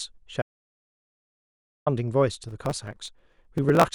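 At 0.42 s the speech cuts to dead silence with no room tone until 1.86 s, an audio dropout to silence. The input was likely lost while zeros kept being written, so 1.44 s is gone. From 2.46 to 3.83 s a gritty processor overload crackle tears across the speech as around a hundred very short buffers, under a millisecond each, are skipped.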